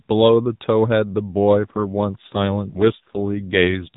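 At 1.57 s an AMR rate drop begins and lasts to the end. The speech turns rougher, buzzier and more synthetic, which fits a fall from 12.2 to 5.9 kbps. The narrowband limit stays unchanged. No gap is heard.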